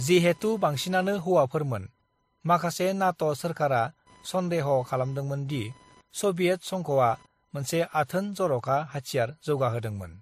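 From start to finish, computer activity noise sits under the speech: a buzzing, chirping texture pulsing at around 1 kHz, roughly 35 dB below the speech. It rises and falls with the machine's workload rather than with the talking, because load swings in the processor or graphics card shift the ground shared with the audio circuit. On a spectrogram it appears as a faint comb of lines near 1 kHz and its harmonics, flickering in bursts independent of the speech formants.

Across the whole clip, the spectrum stops abruptly at 15.2 kHz, and the speech carries a mix of codec artefacts: the artefacts of different codecs heard together. That combination points to transcoding between lossy codecs, likely a WMA encode near 96 kbit/s later re-encoded as MP3 at around 48 kbit/s. The second encoder wastes bits reproducing the first one's damage and adds its own. A spectrogram shows a hard ceiling at 15.2 kHz and blotchy, time-smeared patches in the upper bands.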